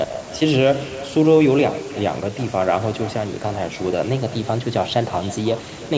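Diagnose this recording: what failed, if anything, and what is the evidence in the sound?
The failure is at the call-processing stage: echo with no canceller. Throughout the speech, each phrase returns roughly a third of a second later as a thinner copy about 17 dB down. Unlike room reverberation, this is a distinct delayed repeat, not a smooth decay.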